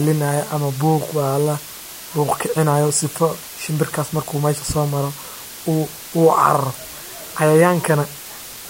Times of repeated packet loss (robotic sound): none

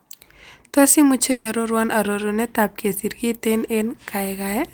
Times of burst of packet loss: 1.31-1.47

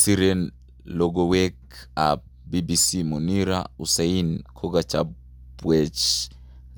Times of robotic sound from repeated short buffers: none

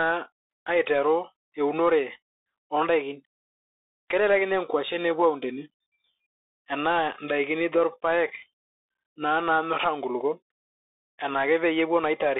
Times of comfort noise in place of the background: none

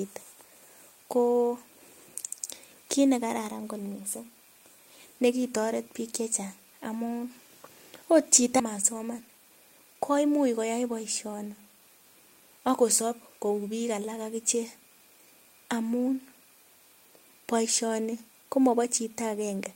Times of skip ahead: 8.59

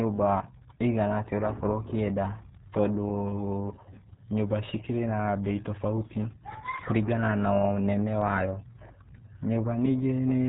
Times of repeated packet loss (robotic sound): none

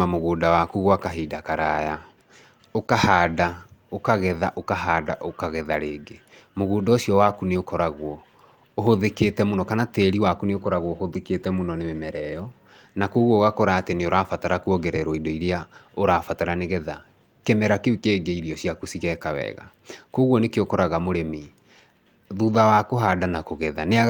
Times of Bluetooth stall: none

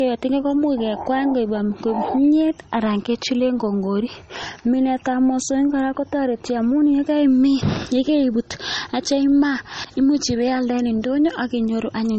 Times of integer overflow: none

